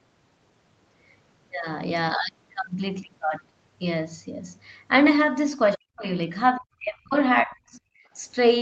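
An echo canceller most likely mistook double talk for loudspeaker echo and turned the near-end talker down along with it, which is speech suppressed in double talk. The speech sinks by roughly 40 dB, almost to nothing, in three bursts: 5.76 to 6.06 s, 6.57 to 7.14 s, and 7.43 to 7.81 s. Each gap chops the talker into fragments, then the level snaps back between them.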